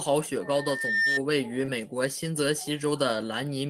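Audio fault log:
0.42–1.21 s, loudspeaker feedback squeal: a 1.8 kHz tone swells over roughly 0.7 s to about 5 dB above the speech, as the mic–speaker loop gain exceeds unity.
1.65–1.70 s, short concealed packet loss: about 20 ms of audio never arrived in time; the decoder extended the preceding sound over 23 ms, heard as a brief smear before the speech resumes.
1.68–1.70 s, lost packet rebuilt from error correction: a 20 ms stretch, consistent with a single lost packet, was replayed from the low-bitrate redundant copy, so it sounds rougher and noisier than its surroundings.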